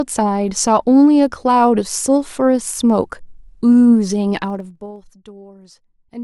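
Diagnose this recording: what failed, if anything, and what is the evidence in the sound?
Between 4.42 and 4.97 s the speech drops by around 20 dB, and a fast ticking, zipping texture rides on it the whole way down: zipper noise. The fade moves in audible 2 dB stairs at about 20 per second, each jump leaving a small click. That points to the gain or buffer stage applying the level once per processing block, roughly every 50 ms, without interpolation.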